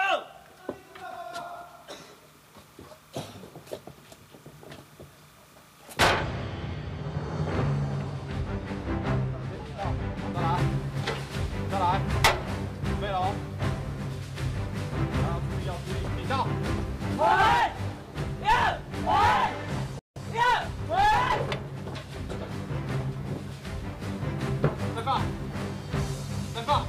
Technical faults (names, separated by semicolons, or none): de-emphasis applied wrongly; playback stall